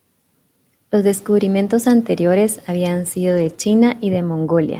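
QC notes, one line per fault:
3.29–3.55 s, lost packet rebuilt from error correction: right after "descubrimientos anteriores habían", several packets went missing and the decoder substituted the low-bitrate copies carried in the following packets. About 140 ms of speech is rebuilt this way, so nothing drops out, but that stretch sounds rougher and noisier.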